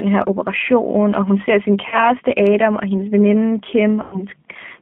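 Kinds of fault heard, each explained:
G.729 codec: The speech is rebuilt from a filter and pitch model, so it sounds rough and synthetic, confined to roughly 200 Hz to 3.5 kHz, fitting an 8 kbit/s codec.
VoIP packet loss concealment by the speech codec: After "og hun ser sin" and "og hendes veninde", missing audio is extrapolated from the preceding sound, leaving a buzzy or noisy stretch that fades.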